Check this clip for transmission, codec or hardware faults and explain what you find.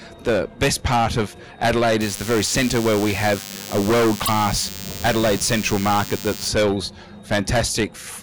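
Two faults are audible: a radio-frequency buzz across the middle of the clip and a brief codec glitch inside it.

DECT cordless phone buzz, 2.00 to 6.48 s. A nearby DECT handset or base transmits a short burst every 10 ms, and the audio circuitry rectifies it. This produces a thin, steady 100 Hz buzz rich in harmonics, sitting about 15 dB below the wanted sound.

Broken MP3 bit reservoir, 4.25 to 4.29 s. The sound jumps ahead and briefly breaks into a chirp or noisy fragment. This is likely caused by missing frames, about 26 ms each. The frame after the gap reaches back for borrowed bytes and decodes another frame's data instead.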